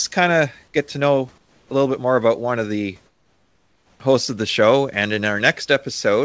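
From 1.38 to 1.70 s and 3.06 to 4.00 s, comfort noise replaces the background with flat, featureless hiss about 5 to 6 dB quieter, likely from discontinuous transmission.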